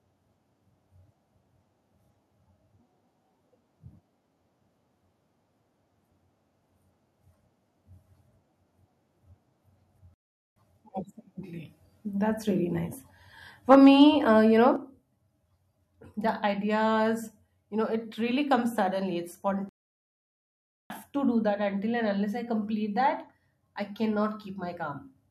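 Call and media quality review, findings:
Playback stall: speech cuts to silence at 10.14–10.56 s (0.42 s) and 19.69–20.90 s (1.21 s). Waveform shows flat gaps. Likely player buffer underrun or blocked audio thread.

Microphone overload: harsh crackle on loud syllables, 13.71–14.02 s, peaks about 4 dB over the converter's limit, a small fraction of samples flattened. Waveform shows squared-off tops and the spectrogram shows broadband smear. Likely input gain too high at the converter.

Microphone volume stepped down: sudden level drops at 13.75 s (about 3 dB) and 14.76 s (about 6 dB). Waveform envelope steps down abruptly. Likely call software's automatic gain control lowering device input.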